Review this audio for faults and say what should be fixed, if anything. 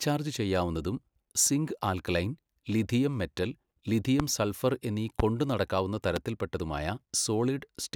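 Voltage spikes, likely from a switch, plug or static discharge, entered the signal as loud pops at 4.20–4.22, 5.20–5.22 and 6.16–6.19 s, about 15–20 dB above the speech.

Secure connectors, ground the setup and avoid switching equipment while recording.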